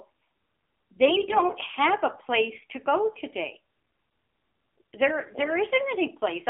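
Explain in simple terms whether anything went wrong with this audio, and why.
AMR narrowband mobile codec, throughout the clip: the speech was squeezed into an old-style mobile phone format that keeps only a narrow band of frequencies and rebuilds the voice from a simple model. It sounds muffled and plainly buzzy and synthetic.

AMR bit errors, from 1.06 to 1.55 s: over about half a second, a few percent of the transmitted data arrived corrupted on a weak link. The voice keeps roughly its pitch and loudness but turns hoarse, scratchy and gargly.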